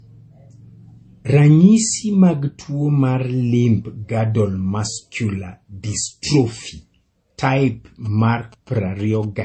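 Throughout the speech, nothing is present above about 8.3 kHz, and two distinct sets of coding artefacts overlap. This pattern is likely transcoding between lossy codecs: a low-rate MP3-style encode, re-encoded as AAC-LC, with the second codec spending bits on the first codec's smearing and adding its own.

From 8.05 to 9.25 s, GSM signalling bursts appear as a galloping run of short buzzes at about 217 Hz, sitting well below the speech level. A nearby 2G phone is exchanging signalling bursts, and the audio circuitry rectifies the radio energy into audible buzzes.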